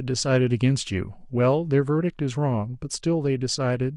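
Nothing in this short bit of speech trips any technical alarm, so there's no fault to walk through here.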